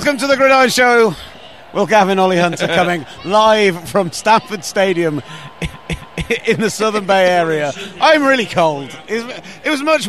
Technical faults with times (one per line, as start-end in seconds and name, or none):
5.73-6.29 CD stuck on one turn